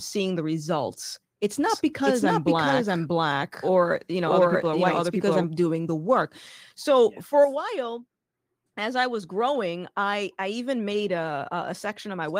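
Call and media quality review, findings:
Doubled audio track, 1.70 s to 5.44 s, after "the results it's", ending before "doing the work so". Full-band copy trailing roughly 0.7 s at about equal level, dry, abrupt onset and cutoff. Likely a second capture path or a misaligned edit. Opus codec path present, fullband hybrid mode, light coding texture, not implicated.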